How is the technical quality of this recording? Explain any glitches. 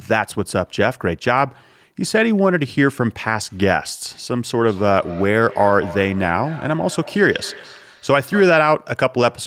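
The speech has one fault. From 4.67 to 8.75 s there is feedback echo between two devices: a second device replays the call, this microphone recaptures it, and its canceller ignores another device's output. Repeats arrive roughly every fifth of a second, about 17 dB down, evenly spaced unlike reverberation's smooth tail.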